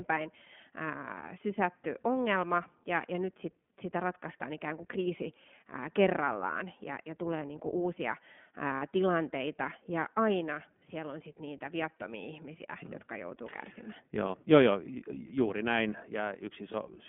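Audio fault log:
throughout, iLBC codec: speech is confined to a 200 Hz to 3.4 kHz telephone band, with a plainly audible rough, synthetic edge from coding each frame's excitation independently, which fits iLBC near 15.2 kbps with 20 ms frames. Unlike a wideband codec, nothing above 4 kHz survives.
8.76 to 8.83 s, 12.86 to 12.89 s, 16.72 to 16.76 s, lost iLBC frames: each gap holds a slightly buzzy, breathy vowel-like tone as the decoder repeats the last pitch cycle with noise. The first gap lasts about 60 ms, which fits three lost frames. Each later gap lasts about 20 ms. Speech recovers almost instantly, unlike codecs whose errors spread into following frames.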